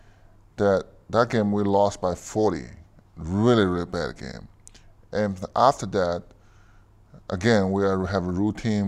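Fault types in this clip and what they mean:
Periodic USB or driver dropouts: a background task stalls the audio path on a fixed schedule, and each stall leaves a gap of roughly a millisecond filled with silence. Here about three such ticks fall exactly 2.0 s apart between 2.85 and 6.87 s, ending just before "again we". Their strict clock-like spacing and tiny size set them apart from irregular buffer underruns or random clicks in the recording.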